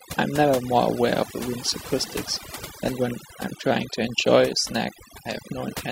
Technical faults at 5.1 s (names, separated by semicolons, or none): overdone noise removal